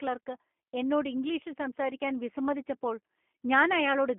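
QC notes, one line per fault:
throughout, G.729 codec: the speech is band-limited to roughly 200 Hz to 3.4 kHz, so it sounds thin and boxy with no air on top. The codec damage is plainly audible. Voices come out slightly rough and synthetic, because each 10 ms frame is rebuilt from a vocal tract filter, a pitch guess and a few pulses rather than the actual waveform. It fits an 8 kbit/s G.729A stream.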